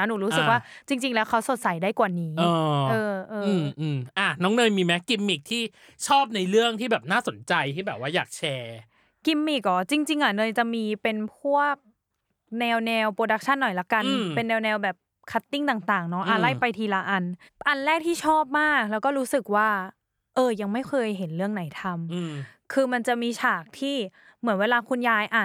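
No technical faults can be heard anywhere in the recording; the signal stays steady and intact throughout.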